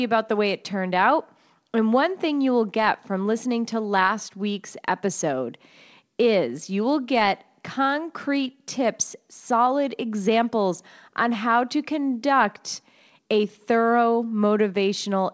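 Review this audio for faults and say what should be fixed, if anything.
Nothing in this speech recording stood out on listening, so there is nothing here that needs fixing.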